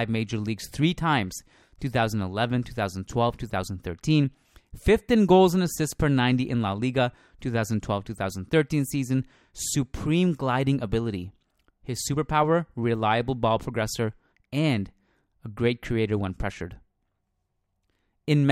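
From 0.18 s to 18.42 s the speech carries clock slip clicks: faint single-sample ticks arriving roughly every tenth of a second, around 150 in all, clearest on louder passages. The steady spacing points to two unsynchronised clocks, likely differing by around 200 ppm, so that whenever the drift accumulates to a whole sample, one sample is dropped or repeated and leaves a small discontinuity in the waveform.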